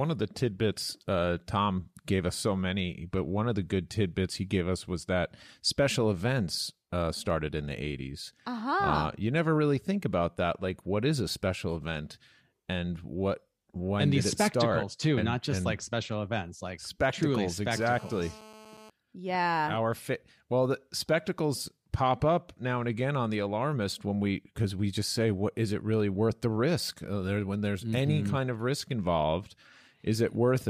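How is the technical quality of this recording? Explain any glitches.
There's one glitch worth flagging: GSM phone buzz from about 17.75 to 18.90 s, right after "special events like spectacles". A nearby 2G phone on a call pulses at about 217 Hz, and the audio circuit rectifies it into a steady, raspy, harmonic-rich buzz sitting about 20 dB below the speech.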